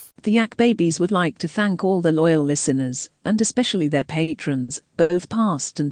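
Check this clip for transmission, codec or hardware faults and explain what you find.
One transmission fault: repeated stalls (stutter) from 3.99 to 5.11 s, right after "loyal listeners and especially". Packets arrived late, emptying the jitter buffer four times; the receiver stretched the last sound to fill about 180 ms, the longest gap 70 ms, so the speech drags and stutters without losing anything.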